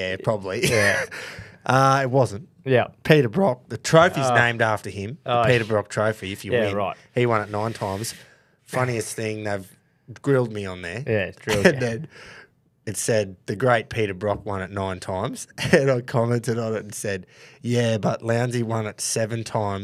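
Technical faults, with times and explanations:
No technical faults are audible anywhere in the recording.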